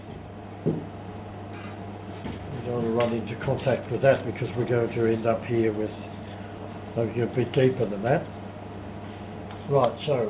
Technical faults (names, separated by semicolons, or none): scattered short gaps; low bit depth with dither